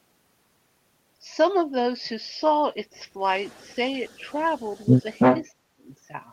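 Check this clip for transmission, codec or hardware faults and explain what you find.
Two faults are present in this speech: an echo leak in two stretches, then a short dropout from speech suppressed in double talk.

Echo leak, 3.45 to 3.74 s and 4.07 to 5.44 s: a copy of the speech returns 331 ms late, very faint in the first stretch and nearly as loud as the speech in the second. The likely cause is a far-end loudspeaker whose echo canceller let its microphone pickup through. On a spectrogram the harmonic patterns repeat, shifted right by about a third of a second. The waveform shows overlapping envelopes.

Speech suppressed in double talk, 5.57 to 5.86 s: the speech sinks sharply, losing roughly 35 dB at its deepest over about 0.3 s. The likely cause is the echo canceller failing to separate the talker from loudspeaker echo while both were active, so it attenuated everything. On a spectrogram the band goes nearly dark across all frequencies, and the waveform envelope collapses for that stretch before recovering.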